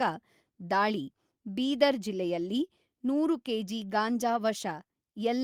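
Nothing in this speech recording sounds wrong, so there's no fault to point to anywhere along its timeline.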